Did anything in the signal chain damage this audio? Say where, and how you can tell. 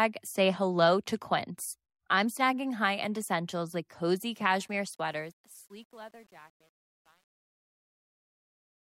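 Yes. A fade or volume stage truncated the samples without dither, which fits a path keeping only 9 bits. The fade-out after "end essentials like cozy" turns gritty from 4.68 s, and from 5.3 s to 8.86 s the waveform collapses into coarse steps.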